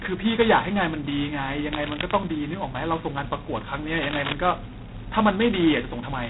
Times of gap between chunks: none

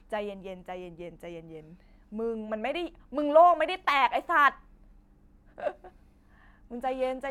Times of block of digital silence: none

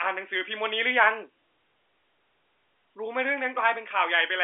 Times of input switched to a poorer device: none

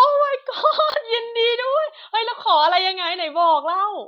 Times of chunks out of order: 0.90-0.94

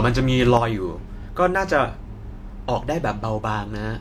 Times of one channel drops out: 0.57-4.00

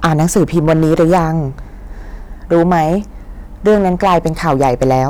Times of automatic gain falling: none

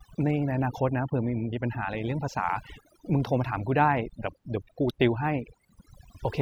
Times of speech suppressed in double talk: none

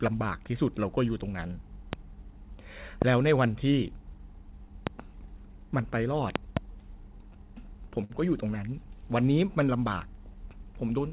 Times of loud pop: 1.93-1.95, 3.02-3.04, 4.87-4.89, 6.36-6.59

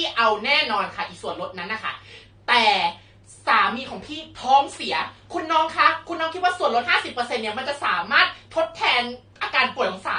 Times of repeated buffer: none

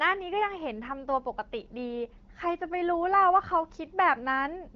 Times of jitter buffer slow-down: none

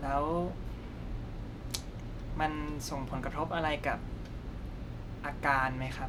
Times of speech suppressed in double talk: none

